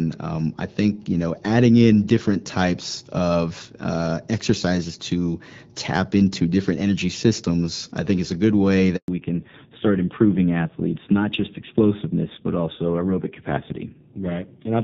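At 8.96 s, just after "is a good way", a handover gap cuts the speech for 120 ms, until 9.08 s. During the network switch no speech frames reached the receiver, so the sound drops out quickly and stays silent until the new link begins carrying audio.

From 9.08 s to the end, there is a fallback to narrowband. The light HD Voice coding heard earlier, consistent with AMR-WB around 12.65 kbit/s, gives way to a duller, rougher sound with nothing above 4 kHz. This points to AMR-NB at a low rate, about 5.9 kbit/s.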